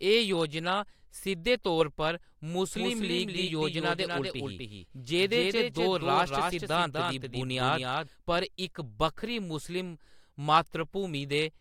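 From 2.76 s to 8.08 s the speech is shadowed by a second, quieter copy, roughly 5 dB down and trailing by about 300 ms, dry and full-band, cutting in and out abruptly: a doubled audio track, likely from a slower second capture path.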